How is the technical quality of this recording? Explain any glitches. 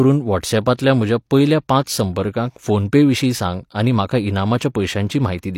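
There is one glitch, a pre-echo at 0.77 s, just before "म्हज्या पयल्या". A codec block spreads quantisation noise meant for the loud onset across the quiet gap ahead of it, so a short hiss lasting about 19 ms leads in and the attack sounds smeared. Unlike a click or a real echo, the disturbance comes before the sound rather than after it.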